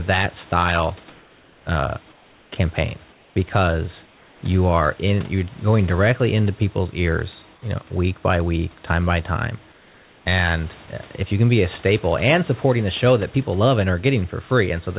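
In this speech clip, the sender's voice detector likely misjudged two brief moments as background and stopped sending, so the sound dropped by the voice detector gives way to synthetic fill for about 20 ms at 0.5 s and again at 10.86 s, each heard as a tiny gap in the speech. During pauses, discontinuous transmission likely halted the stream and the receiver substituted comfort noise in place of the background at 2.12–2.52 s, 3.12–3.36 s, 4.06–4.42 s, 7.54–7.62 s and 9.72–10.26 s. Each time the real room noise turns smooth and featureless and drops by about 3 to 4 dB. The call path leaves nothing above 4 kHz, which fits G.711 narrowband coding.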